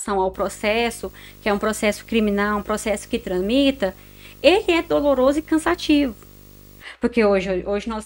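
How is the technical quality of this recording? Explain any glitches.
The recording is compromised by video or display buzz. From 0.34 to 6.83 s, a screen or video cable couples in a 50 Hz field-rate buzz with hash, well below the speech, plus a thin 15.6 kHz line-rate whine that plain mains hum would lack.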